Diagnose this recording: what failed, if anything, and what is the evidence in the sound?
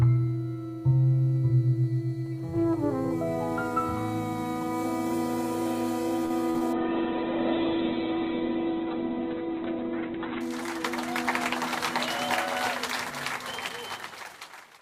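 The network and jitter buffer failed first. At 6.25 s a packet arrived late and the buffer ran dry. The receiver held the last sound for 49 ms, from 6.25 to 6.32 s, then resumed where it stopped. Nothing is lost. The sound simply hangs a moment too long, with a slight buzz or dip. This short stall from a late packet also added 49 ms to the playout delay.

Two short concealed packet losses follow, at 6.50 to 6.56 s and 6.58 to 6.63 s. Here the audio never arrived in time. About 40 ms is missing in the first gap and 20 ms in the second. The decoder bridged each hole by extending the previous sound, then crossfaded back into real audio. Each gap is heard as a brief smear or wobble, close together.

Next comes a call bitrate drop, a codec-stage response to the network trouble. From 6.73 to 10.49 s the sound turns rough and muffled. The top of the spectrum falls from 20 kHz to 4 kHz. That points to the encoder being throttled from about 96 kbps to 8 kbps. 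It sat at the lowest rate for 3.68 s before recovering. Coarse coding gives the watery texture, and the narrow band removes the air.

Finally, a jitter buffer speed-up runs from 13.10 to 14.07 s. The buffer had built up too much delay. To shed it, the receiver cut tiny pitch-period slices many times in a row. Roughly a twentieth of a second was removed in total. Playback runs at 104% speed with unchanged pitch.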